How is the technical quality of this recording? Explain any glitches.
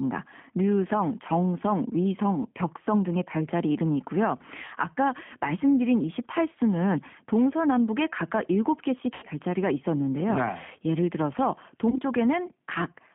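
Quality is limited: it's a narrowband phone-style recording with plainly audible codec damage, plus two short dropouts.

The G.729 codec runs throughout. The band sits at roughly 150 Hz to 3.4 kHz, and the rough, slightly synthetic texture fits an 8 kbit/s G.729A link rebuilding speech from a filter, pitch predictor and a few pulses per frame.

VoIP packet loss concealed by the speech codec hits at 9.14–9.25 s and 11.90–11.98 s. The decoder guessed forward from its last pitch and filter, giving a buzzy or noisy smear that fades. The first sounds like about 80 ms lost (four packets), the second about 20 ms (one).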